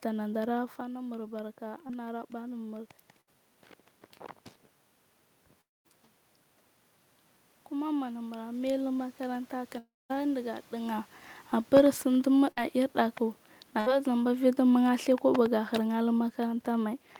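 The clip is speech, and it has a mix of gain and network faults. Right at the start the level rises: from 0.77 to 2.95 s the automatic gain is rising, pushing the gain up about 3 dB after the input fell by about 10 dB when the talker moved back from the mic around 0.5 s. The voice and the room noise swell together over those two seconds or so, the control slowly chasing the quieter input. Inside that stretch, at 1.87 to 1.91 s, there's a short concealed packet loss. About 20 ms of audio never reached the decoder in time, and the receiver papered over it by stretching the previous sound, so you hear a brief smear or wobble rather than a gap. Then come three bursts of packet loss, at 3.21 to 3.29 s, 12.51 to 12.59 s and 13.81 to 13.90 s, each losing about 60 ms. In each one the last sound is carried on for roughly 50 to 60 ms and faded, so it becomes a held buzz or a dying hiss, and the speech picks up again a little further on with that bit gone. 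The two longer holes, from 5.61 to 5.86 s (about 240 ms missing) and 9.78 to 10.16 s (about 320 ms missing), are likely long network dropouts. The concealment rings on as a fading buzz or hiss, settles into a couple of tenths of a second of silence, and the speech comes back with that stretch simply missing.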